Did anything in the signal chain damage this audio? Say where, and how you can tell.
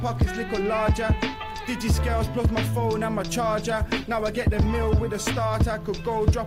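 Yes. A call bitrate drop in the codec stage starts at 3.71 s and lasts to the end. The encoder's rate falls from 64 kbps to 18 kbps, holding its lowest for 1.2 s. Coarser coding and lost high frequencies degrade the sound, with no recovery before the clip ends.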